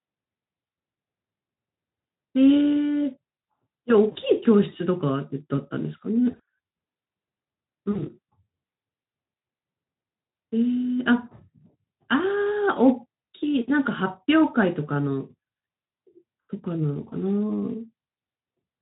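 A brief buzzy or noisy smear, with the sound stretched and fading rather than breaking into silence, appears at 4.11–4.18 s, again at 6.31–6.48 s, and at 7.91–8.06 s. This is VoIP packet loss concealed by the speech codec. Each time, the Speex decoder filled missing audio (about 40 ms at the first and third points, and 100 ms scattered across 160 ms at the second) by extending its last pitch and filter with falling gain, leaving the sound weak or distorted for a short while afterward.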